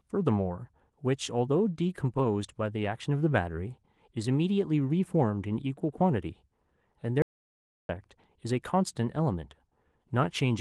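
At 7.22 s the speech cuts off abruptly into dead digital silence, with no room tone at all, and returns at 7.89 s, so about 0.67 s of speech is simply missing. This audio dropout to silence likely comes from the input briefly disconnecting or muting while the recorder kept writing silence, with the light Opus voice coding carrying on undisturbed around the gap.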